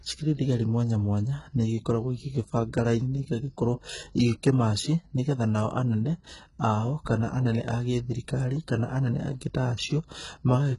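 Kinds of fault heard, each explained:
HE-AAC compression: The speech has a gritty, metallic top end throughout, with s sounds coming out lispy and synthetic, and nothing at all is heard above about 11.1 kHz. This is likely heavy HE-AAC v2 coding at a very low rate, fitting roughly 12 kbps. Only the lower spectrum is truly coded. The treble is rebuilt by copying lower bands upward under a coarse envelope, so its harmonics fail to line up with those below.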